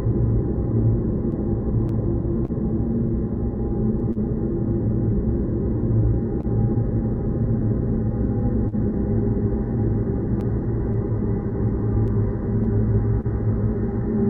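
Clock drift between sender and receiver runs through the whole recording. The sender's clock is about 2% slow, so the jitter buffer keeps draining and short repeats recur unevenly, visible as small duplicated waveform segments.

A short stall from a late packet occurs at 2.45–2.51 s, 4.12–4.19 s, 6.41–6.46 s and 8.68–8.75 s. Each time, the receiver holds the last sound for 30, 34, 26 and 38 ms, which sounds like a brief buzzy hang. On a spectrogram these show as horizontally smeared, flat bands.

Scattered short gaps follow from 10.4 to 13.27 s. Roughly seven packets were lost or late, each patched by continuing the sound, with the longest patch about 30 ms. They are heard as ticks and hiccups and appear as thin smeared slivers in the waveform.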